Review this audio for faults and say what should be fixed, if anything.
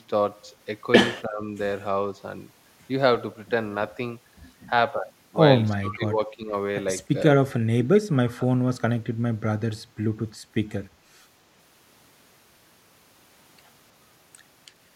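Speech suppressed in double talk at 1.26–1.47, 5.78–6.55, 7.71–7.88 and 8.08–8.47 s. The speech sinks by roughly 15 to 20 dB, likely because the echo canceller mistook near-end talk overlapping the far-end audio for echo. Unlike packet-loss dropouts, it dips rather than cutting cleanly. Better double-talk detection in the canceller would prevent it.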